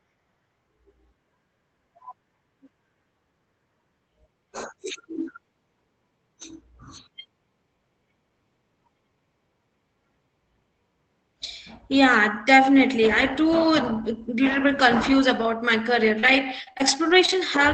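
From 16.19 to 17.44 s, repeated packet loss (robotic sound) hits the speech: six gaps, the longest 32 ms, were patched by extending the previous sound. Roughly a tenth of that stretch is rebuilt, so it turns choppy, with pieces missing.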